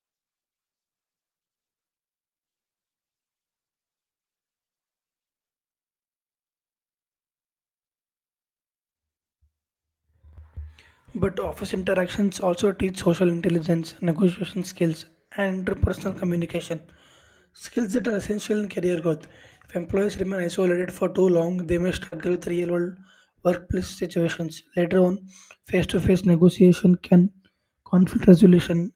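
Around 13.59 to 13.65 s, between "interactions also teach social" and "negotiation skills and interpersonal", packets were lost and rebuilt from the low-bitrate copies carried in the following packets. There's no gap, but the sound turns rough and noisy there. The same lost packet rebuilt from error correction recurs at 17.77 to 18.11 s, at 20.81 s after "employees remain", then at 22.12 to 22.70 s, at 24.26 to 24.32 s after "world workplace", and at 25.94 to 26.04 s, each stretch coarser than its surroundings.

At 22.07 to 22.14 s there's a short concealed packet loss, overlapping the start of that 22.12 s stretch. About 40 ms arrived too late, and the receiver bridged it by extending the preceding sound before blending back into real audio. It comes across as a brief smear just as the rougher patch begins.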